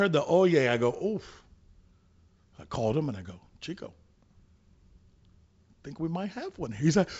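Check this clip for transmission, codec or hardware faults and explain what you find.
No transmission, codec or hardware faults detected; the speech sits on a G.722-style wideband telephone path with the band ending near 7.7 kHz, consistent with the 64 kbit/s mode.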